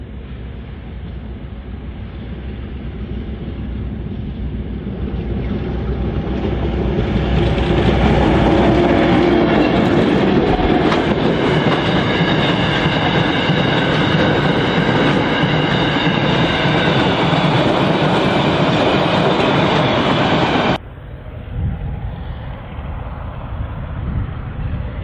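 Nothing stood out on listening to this audio.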